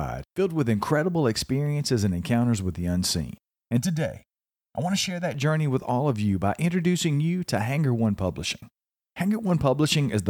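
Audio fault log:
3.77–5.34 s, channel delay (comb filtering): the speech turns hollow and phasey, with a fixed notched coloration. One channel arrives roughly 1.5 ms late, and summing to mono cancels evenly spaced frequencies, the first notch falling around 400 Hz.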